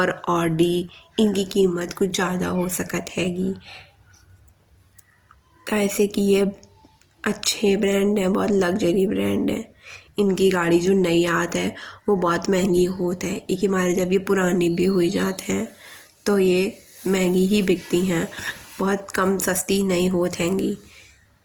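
Throughout, the speech sounds grainy and rough yet extends to 20.2 kHz. This is likely Opus compression in its music mode at around 24 kbps, filling bands with noise.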